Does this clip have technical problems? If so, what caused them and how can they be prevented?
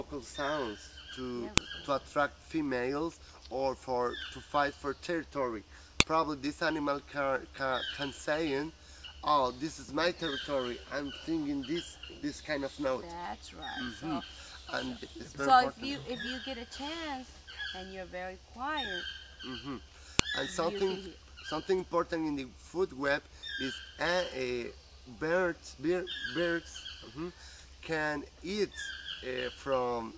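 Yes. Sharp, loud clicks or snaps cut abruptly through the audio at 1.58 s, 6.00 s and 20.19 s, each lasting about a millisecond. This is a file header played as audio: separate WAV pieces were joined or streamed with their headers left in, so a few dozen header bytes were decoded as sample values at each join. To prevent it, strip each piece's header and join only the raw sample data.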